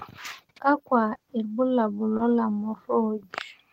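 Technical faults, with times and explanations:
1.13–1.21 s: short concealed packet loss, two back-to-back gaps of about 20 ms each. The decoder had nothing to play, so it extended the preceding sound, following its pitch where voiced and using shaped noise otherwise, then crossfaded into the returning audio. This gives a brief smear or wobble.
2.17–2.21 s: short concealed packet loss, a single 20 ms gap filled the same way, heard as a shorter smear or wobble.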